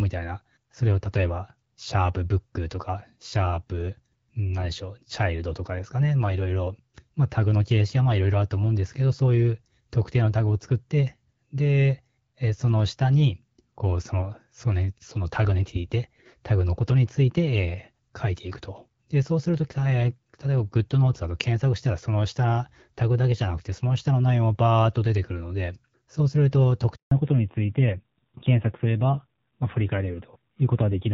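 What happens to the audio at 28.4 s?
By 28.4 s the call has undergone a fallback to narrowband, which began at 27.11 s and lasts to the end of the clip. The link stepped down from HD Voice (AMR-WB) to the older AMR-NB codec, so nothing above 4 kHz survives, and the sound turns dull, boxy and rasping, which fits a low-rate mode around 7.4 kbit/s. Unlike a gradual bitrate dip within wideband, this is an abrupt, lasting loss of the upper band.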